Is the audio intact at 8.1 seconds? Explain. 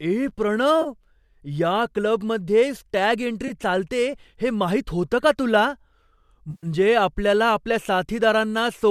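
Yes, the speech at 8.1 seconds is intact, with nothing at that moment beyond the light coloration of the low-delay AAC compression, likely AAC-ELD at a moderate bitrate, that runs through the clip.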